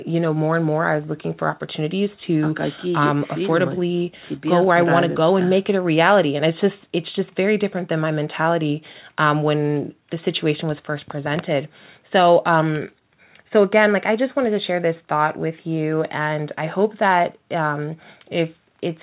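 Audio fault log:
No faults logged; the speech came over a WebRTC call path whose band ends at 4 kHz, consistent with G.711 mu-law.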